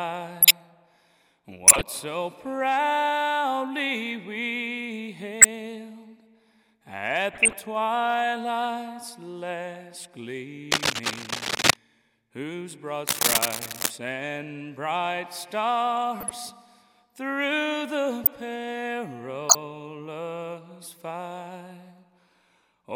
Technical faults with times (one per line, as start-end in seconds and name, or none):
0.41-0.51 corrupt frame decoded
1.63-1.81 corrupt frame decoded
5.41-5.45 corrupt frame decoded
7.32-7.53 corrupt frame decoded
10.71-11.76 cable scratch noise
10.95-10.98 corrupt frame decoded
13.07-13.90 cable scratch noise
16.20-16.31 corrupt frame decoded
18.24-18.29 corrupt frame decoded
19.49-19.55 corrupt frame decoded